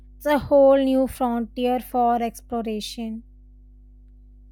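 Mains hum runs under the speech from start to finish: a steady 50 Hz tone, sitting roughly 25 dB below the voice, where a ground loop or nearby transformer has leaked the power line into the signal. A spectrogram shows an unbroken horizontal line at 50 Hz with low harmonics above it.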